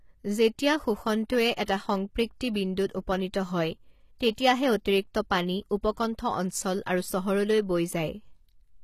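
Throughout the speech, the treble has a gritty, metallic quality, and nothing is present above 14.9 kHz. This is likely HE-AAC compression at a rate that fits about 20 kbps. Only the lower spectrum is coded, and the upper bands are rebuilt from copies of it, so sibilants sound lispy and their harmonics do not line up. A plain low-pass cut would sound dull and clean instead of bright and artificial.

Pre-echo appears as a short hiss just ahead of sharp onsets. The first is at 1.535 to 1.568 s, a 33 ms spread. The second is at 1.65 to 1.68 s, 28 ms long, just before "সংপৃক্তি বিন্দুত উপনীত হয়". A 15 ms one falls at 2.54 s, before "বিন্দুত উপনীত হয়". A 16 ms one is at 4.19 s, after "সংপৃক্তি বিন্দুত উপনীত হয়". The last is at 4.36 to 4.38 s, 21 ms long. In each case, noise spread across a coding block spills into the quiet moment before the attack. Unlike reverb, this smear comes before the onset rather than trailing after it, and unlike a click, it is a soft hiss instead of a sharp tick.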